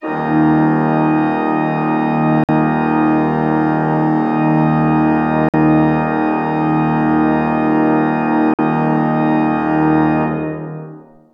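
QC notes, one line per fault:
2.44–2.49 s, 5.49–5.54 s, 8.54–8.59 s: gap between chunks. Each join leaves a 50 ms hard-edged silence. The sound resumes intact after each 3 s chunk.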